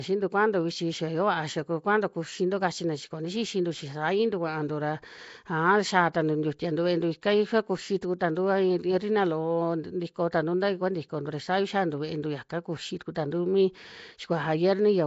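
Throughout this speech clip the sound is rough and hissy with a smeared, underwater quality, and nothing is heard above about 7.7 kHz; that is plainly audible codec damage, likely from Nellymoser compression at a low rate near 32 kbps. At 8.01 s and 13.15 s a brief hiss of about 10 ms runs ahead of a sharp attack, softening it: pre-echo, where the codec's quantisation noise spreads across its block into the quiet moment before the onset.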